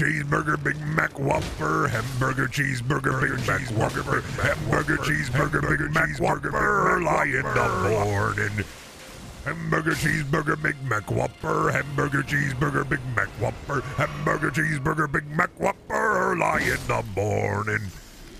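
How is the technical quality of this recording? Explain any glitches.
There is one glitch: a doubled audio track from 3.12 to 8.04 s. During that span a second, full-band copy of the sound runs about a second behind the original and roughly 5 dB quieter. It switches in and out abruptly. The likely cause is the same signal being captured again through a slower path. Unlike room echo or reverb, the copy has no decay, no repeats and no added room colour.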